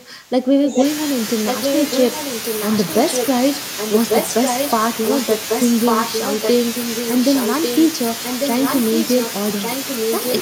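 In this speech recording, the echo canceller likely failed to tell the talker from the returning echo while both sides spoke, so speech suppressed in double talk pulls the voice down by as much as about 20 dB for most of 0 to 0.81 s. An echo canceller likely let loudspeaker pickup through as echo leak: a copy of the voice returns about 1.15 s late and roughly 5 dB below the speech at 0.74 to 0.85 s, 1.46 to 3.27 s, 3.77 to 4.71 s, 5.08 to 7.86 s, 8.23 to 9.31 s and 9.62 to 10.34 s.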